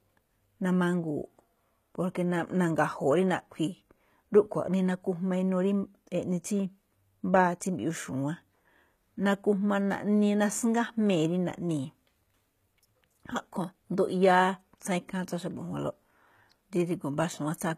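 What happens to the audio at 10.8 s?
At 10.8 s you're hearing the same thing that runs through the whole speech clip, and it's likely HE-AAC compression at a low bitrate, something around 20 kbps by the sound of it. The codec keeps only the lower spectrum and fakes the treble by copying lower bands upward under a rough envelope, so the top end reaches high but isn't right. S sounds come out gritty and plainly lispy, and nothing survives above about 14.9 kHz.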